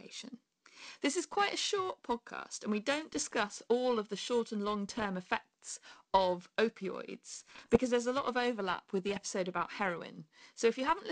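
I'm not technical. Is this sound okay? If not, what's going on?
No. Throughout, the speech has periodic clock jitter: the recording device's timing wobbles about a thousand times a second, adding a rough, metallic edge that disappears whenever nobody is speaking.

There are also bit errors on an ADPCM link, a digital phone-style connection garbling data. They cause short pops and rough bursts from 3.13 to 3.33 s, after "podcast and we don't"; 4.89 to 5.07 s; 7.40 to 7.78 s, after "effects of opioids"; and 9.09 to 9.26 s, after "of overlap with the". Unlike the constant jitter, these come and go in brief patches.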